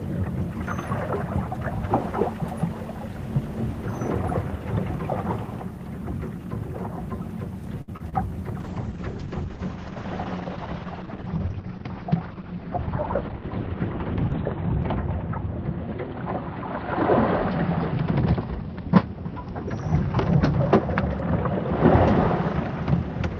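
A short stall from a late packet runs from 7.81 to 7.93 s. A packet arrived late, the jitter buffer emptied, and the receiver held the last sound for about 64 ms before resuming at the same point. Nothing is lost, but the sound hangs slightly too long with a slight buzz or dip.

Short concealed packet loss follows at 7.97–8.01 s and again at 8.09–8.14 s. Each time about 20 ms never reached the decoder, and the receiver extended the preceding sound to bridge the gap before blending back in. Each is heard as a brief smear or wobble.

A call bitrate drop begins at 8.61 s and lasts to the end. The bandwidth estimate fell, taking the encoder from 32 to 8 kbps and narrowing the coded band from 20 kHz to 4 kHz. It stays at the lowest rate for about 5.8 s, and the audio turns muffled and rough.

A jitter buffer speed-up runs from 12.20 to 12.63 s. With too much audio queued, the receiver repeatedly cut out tiny pitch-period slices, around 70 ms in total. 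The sound plays at about 112% speed at unchanged pitch, briefly hurried.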